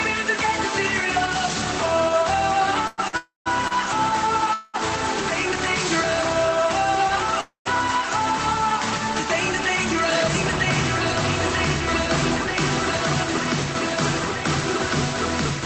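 From 2.87 to 3.73 s the sound hits repeated stalls (stutter). Packets reached the receiver late and the jitter buffer kept running dry, so it held the last sound three times, about 187 ms in all, with the longest hold 104 ms, roughly a fifth of that stretch. It drags and hiccups rather than losing anything. On a spectrogram this appears as short, flat, smeared streaks where the harmonics stop evolving. In the waveform, repeated-looking segments interrupt the normal envelope.

Inside that passage, from 3.17 to 3.48 s, sits the first call audio freeze, likely caused by packets held up in transit. The receiver stretches the last sound for 287 ms into a fading buzz that ends in about 140 ms of silence, and then the audio resumes where it left off. A second freeze at 4.54 to 4.76 s fills 201 ms with a fading hold that never reaches silence. A third, at 7.41 to 7.67 s, runs 248 ms and ends in about 110 ms of silence. 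On a spectrogram each freeze shows frozen horizontal bands thinning out, and the first and third then show a blank column where they went silent. The waveform shows a decaying tail, then flat line in those two. Throughout, energy stops near 8 kHz, which fits the Opus call codec at a low bitrate.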